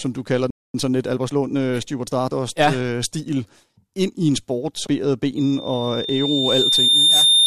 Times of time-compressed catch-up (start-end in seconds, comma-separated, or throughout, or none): 0.74-2.32